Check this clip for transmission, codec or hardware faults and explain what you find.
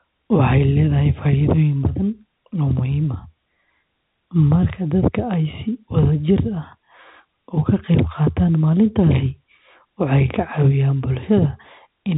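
No faults found; the speech sits on a G.711 telephone path with nothing above 3.8 kHz, as that coding is meant to behave.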